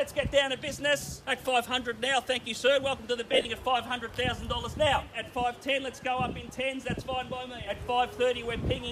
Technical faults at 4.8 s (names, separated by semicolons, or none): none